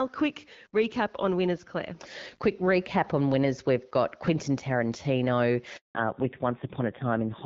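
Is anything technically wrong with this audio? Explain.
Yes. There are two faults near the end of the speech.

A handover gap runs from 5.77 to 5.95 s. The call switched networks, and no speech frames arrived for about 180 ms. The voice cuts off abruptly. Silence follows until the new link carries sound again.

A fallback to narrowband follows at 5.95 s and lasts to the end. Before it, the clear HD Voice sound, which fits AMR-WB at 12.65 kbit/s, extends well above 4 kHz. Afterwards nothing above 4 kHz remains. The voice turns dull and rough, which points to a low-rate AMR-NB codec.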